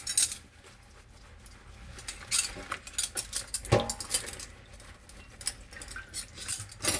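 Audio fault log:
Nothing to log here; the recording of sounds runs along without a single problem turning up.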